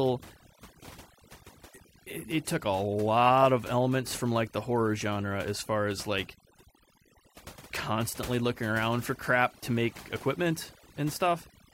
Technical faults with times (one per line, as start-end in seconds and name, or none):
0.00-11.73 overdone noise removal